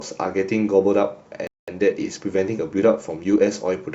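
Speech runs normally until 1.47 s, when it falls silent for about 0.21 s (to 1.68 s). That is a playback stall, likely from the player running dry or blocking, and it shows as a flat, empty gap in the waveform. From 1.68 s to 3.74 s comes time-compressed catch-up: the speech hurries along at about 1.1 times speed while keeping its normal pitch. On a spectrogram, the harmonics stay at the same height, but syllables sit closer together, with small seams where pieces were cut and cross-faded.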